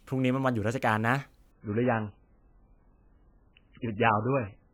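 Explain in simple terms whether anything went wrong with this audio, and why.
From 1.51 s to the end, the speech turns dull and muffled, with nothing above about 3.1 kHz. This is an adaptive stream at a lower bitrate: the connection slowed, so a poorer copy played. It switches abruptly without any gap, unlike a dropout.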